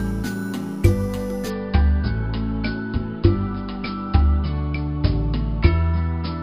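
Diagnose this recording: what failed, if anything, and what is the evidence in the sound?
Imaging from sample-and-hold upsampling runs from 0.0 to 1.5 s, introduced at the sample-rate conversion stage. A bright, metallic fizz rides on the sound, rising and falling with its level. The first mirror copy sits between about 5.5 kHz and 11 kHz, roughly 24 dB below the signal, which points to material at about 11 kHz being raised to 44.1 kHz. Each sample was simply repeated without an interpolation filter, so spectral images survive around multiples of the original rate.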